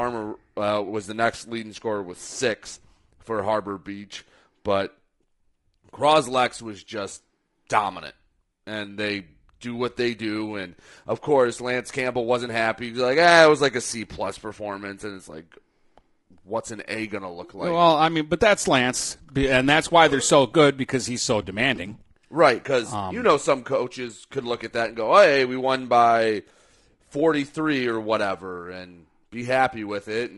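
Low-delay AAC compression throughout: the speech sounds rough and grainy, with noise between harmonics, likely from AAC-ELD's short frames at a bitrate near 32 kbps.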